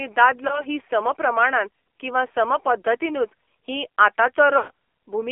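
The whole clip carries the sound of an AMR narrowband mobile codec. Speech sits in a band of about 300 Hz to 3.4 kHz, with nothing above. The voice is buzzy and synthetic, and the damage is plainly audible. The coder rebuilds speech from a vocal tract model fed by sparse pulses. That fits a low mode near 7.4 kbps, where few bits leave the excitation coarse.

At 0.48 to 0.64 s there are lost AMR speech frames. It is brief, like a single dropped frame. The decoder reused the last pitch and tract settings at lower gain. The result is a short dip and warble before the voice steadies.

At 4.58 to 4.71 s the loss runs longer, like about six frames, roughly 120 ms. The repeated settings stretch the sound out, and the voice fades toward silence. It returns weak and rough.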